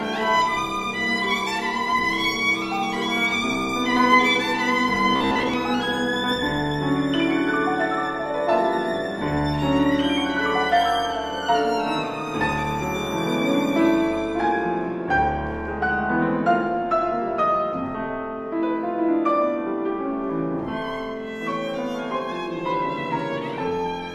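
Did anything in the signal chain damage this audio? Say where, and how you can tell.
Yes. From 5.16 to 5.54 s the sound turns into a rigid, metallic buzz at about 66.8 Hz. This is robotic sound from repeated short buffers, likely at the driver or buffer stage. Fresh audio arrived too seldom, so the software filled the gaps by replaying the last short block, about 15 ms long, while the real material was skipped. About half of that stretch is repeats, and they impose the fixed-rate buzz over the original pitch.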